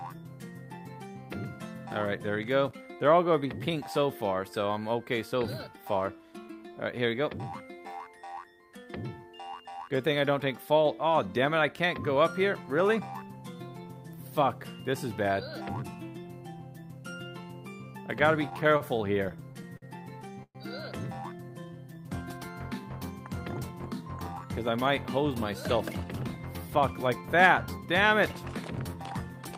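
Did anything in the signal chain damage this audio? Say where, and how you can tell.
Yes. At the network and jitter-buffer stage, packets kept arriving late between 18.49 and 19.84 s, so the buffer ran dry ten times. This produced repeated stalls (stutter): short stretched fills of up to 49 ms, 165 ms in total, about 12% of the span. The sound drags and stutters, but nothing is lost.

At 20.43 s there is a call audio freeze. The sound is extended for about 0.12 s, and 60 ms of it decays to silence before playback resumes where it stopped, now 119 ms later. The likely cause is packets held up in the network, leaving the jitter buffer empty.

From 21.49 to 22.10 s, jitter buffer slow-down repeats single pitch periods to rebuild the reserve. About 68 ms is added, so the sound plays at 90% speed with unchanged pitch, and sounds are drawn out.

Jitter buffer speed-up trims an overfull buffer by cutting pitch-period slices. 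From 24.45 to 25.25 s, about 50 ms is removed (105% speed). From 26.37 to 27.87 s, about 100 ms is removed (106%). The sound runs hurried with its pitch unchanged.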